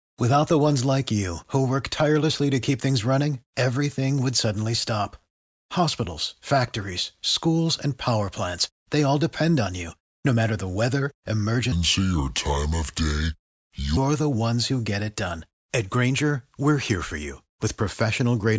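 From 11.72 to 13.97 s the speech turns low and slow, just before "the ones who get". This is a wrong sample rate fault. Playback runs at two-thirds speed. Pitch drops about 7 semitones. That fits 24 kHz audio played at 16 kHz without conversion.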